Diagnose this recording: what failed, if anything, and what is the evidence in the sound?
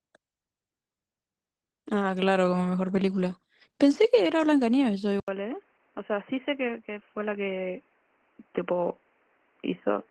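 Codec stage: Opus voice compression runs through the whole recording, giving the speech a hoarse, slightly robotic texture with coarse excitation. The damage fits hybrid SILK-plus-CELT coding at around 16 kbps in 20 ms frames. Unlike a plain low-pass, the wide band survives while detail degrades.

Input stage: at 5.20 s an 80 ms silence precedes duller, boxier sound with nothing above 3.1 kHz, a few dB quieter, plus a new noise floor about 35 dB down. This is likely the input switched to a poorer device. A codec bandwidth drop wouldn't bring the gap, noise change or level step.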